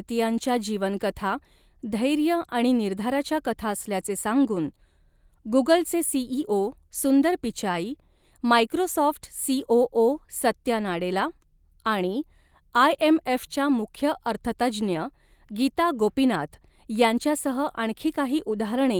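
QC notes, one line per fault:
No faults found: the speech carries full-band content up to about 20.2 kHz through Opus voice compression, and the light coding texture points to hybrid mode at a moderate rate around 24 kbps.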